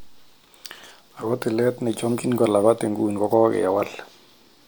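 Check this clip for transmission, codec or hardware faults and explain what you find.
Nothing in this speech recording points to a fault of any of the kinds asked about. There is nothing to report.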